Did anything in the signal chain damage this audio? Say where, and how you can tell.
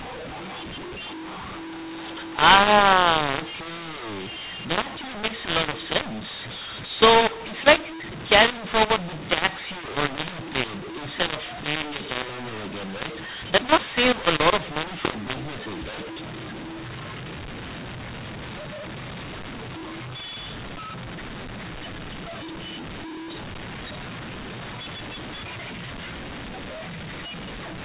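Yes, and it's at the codec stage: a classic mu-law and A-law mix-up. The speech was encoded as G.711 mu-law but decoded as A-law, so every 8-bit code lands on the wrong level. That's why it sounds harsh and gritty from start to finish, and why the pauses never go quiet but hiss with noise. The quietest samples get pushed well up. The coding itself is fine, band-limited to 4 kHz as telephone audio should be.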